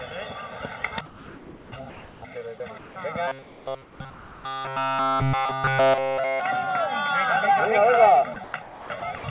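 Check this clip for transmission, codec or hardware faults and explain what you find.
Several faults are audible: constant comb filtering, three stretches of comfort noise, a robotic buzz, and voice-detector chopping near the end. All of this sits on a narrowband call path whose G.711 A-law coding leaves nothing above 4 kHz.

Channel delay (comb filtering) runs for the whole clip. One channel trails the other by roughly 1.5 ms, and when the two are summed to mono, the shared content cancels at regularly spaced frequencies. The first notch falls somewhere around 300 Hz, with further notches repeating above it. The result is a fixed hollow, phasey colouring that stays the same regardless of what the sound is doing.

Comfort noise in place of the background appears three times: 1.06 to 2.22 s, 2.78 to 2.96 s and 3.42 to 4.44 s. During each gap, the real background drops out and a steady, featureless hiss takes over. 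In the second instance, the background sits about 23 dB below the loud passages and the fill is about 2 dB quieter than what it replaces. The likely cause is discontinuous transmission, with the receiver synthesising noise while the sender is silent.

Robotic sound from repeated short buffers spans 3.28 to 6.41 s. The audio becomes a rigid, metallic buzz pitched at 134 Hz that only loosely follows the underlying sound. Essentially none of the real audio survives this stretch. A period of 134 Hz fits a repeated buffer of about 7.5 ms, likely from the playout side looping its last block because new packets arrived too seldom.

Sound chopped by the voice detector occurs from 8.34 to 9.24 s. Here the sound turns choppy, with quiet portions and edges cut away. In total, about half a second is replaced by fill. The likely cause is the sender's voice detector toggling on and off repeatedly across this stretch, substituting comfort noise each time it closes.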